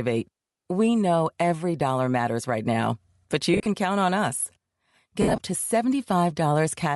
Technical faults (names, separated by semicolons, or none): Bluetooth LC3 compression; lost LE Audio frames